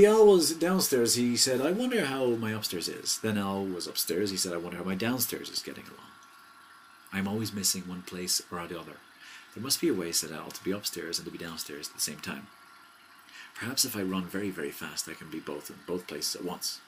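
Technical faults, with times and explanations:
4.91–5.80 s, train of clicks: about five evenly spaced ticks at roughly 4.5 per second, each peaking at about the level of the surrounding sound. This is likely interference from nearby equipment or a faulty connection injecting repeated pulses. On a waveform they appear as a short row of near-identical narrow spikes. On a spectrogram they are thin vertical lines spanning the full frequency range, regularly spaced.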